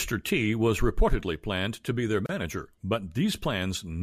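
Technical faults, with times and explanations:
2.26–2.29 s, gap at a join of encoded pieces: Right after "planned to be their", the speech drops into a 31 ms silence with smeared edges, then resumes where it stopped. Separately encoded pieces, joining every 4.0 s, kept their untrimmed encoder start delay and end padding.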